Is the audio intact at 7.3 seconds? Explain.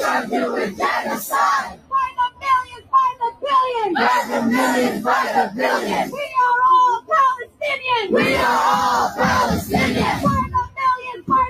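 No. From 6.99 to 7.63 s, the sound is cut by the noise suppressor. It treats this stretch as noise and pulls it down by as much as about 19 dB over roughly 0.4 s in total. The waveform dips sharply and the spectrogram fades to a thin, dark patch.

That dip sits on a wider problem, a noise suppressor applied to music or sounds. Across the whole clip it mistakes sustained content for noise and pumps the level by around 10 dB. On a spectrogram, held energy flickers and decaying tails break off early.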